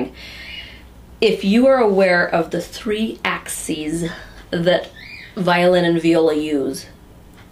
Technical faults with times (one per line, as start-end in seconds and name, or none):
none